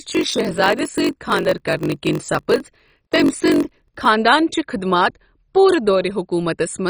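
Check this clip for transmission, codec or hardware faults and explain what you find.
Two faults are present in this speech clip: heavy codec damage across the whole recording, and a block-size problem during the first four seconds.

MP2 compression, throughout: the speech sounds dull, and what remains has a gurgling, granular texture with bands flickering in and out. The likely cause is MPEG Layer II coding at a starved rate, consistent with about 32 kbps, where upper sub-bands are switched off and the rest are coarsely quantised. Unlike a plain low-pass filter, the damage shifts from moment to moment rather than sitting as a steady dullness.

Block size mismatch (padded), from 0.0 to 4.06 s: a steady buzz at 46.9 Hz runs under the speech, and the audio plays at 0.938 of its normal speed. The pitch stays roughly where it should be. The buzz points to a stage that writes blocks shorter than the 1024-sample blocks the next stage reads, leaving a zero-filled gap at the end of each block. 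A sample-rate mismatch would also slow the audio, but it would lower the pitch and add no buzz.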